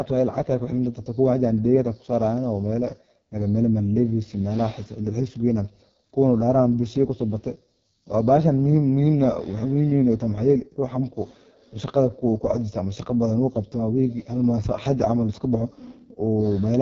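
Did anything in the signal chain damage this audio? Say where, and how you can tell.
Yes, at the codec: AMR wideband (HD Voice) coding throughout. The speech is rough and raspy, which fits its lowest 6.6 kbit/s mode, and nothing above 7.4 kHz rules out narrowband's 3.4 kHz ceiling.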